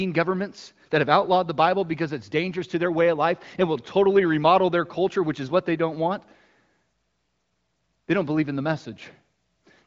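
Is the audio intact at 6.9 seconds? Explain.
Yes, the speech is intact at 6.9 seconds, carried cleanly by the AMR wideband (HD Voice) codec with its usual band limit near 7.6 kHz.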